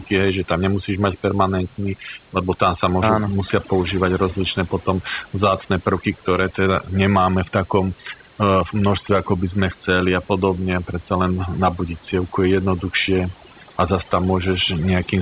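Overdone noise removal runs through the whole recording. The suppressor was set far too aggressively, so every frequency band whose level falls near its noise estimate is pulled down hard or switched off entirely. That takes the room noise, sitting about 32 dB below the speech, but also the softer parts of the speech itself, leaving near-silent gaps filled with twinkling specks. Everything sits below 4 kHz, which fits a narrowband call codec such as G.711.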